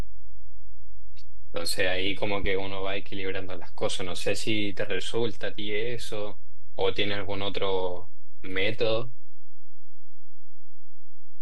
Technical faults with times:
0.00-11.42 DC offset

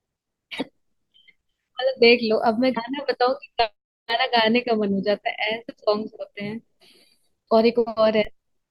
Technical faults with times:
0.56-0.60 damaged data in a compressed stream
2.73-2.78 damaged data in a compressed stream
3.60 DC step
8.25 DC step

